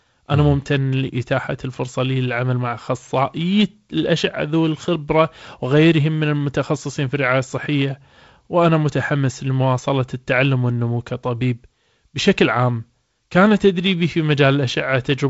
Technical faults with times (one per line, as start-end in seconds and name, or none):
none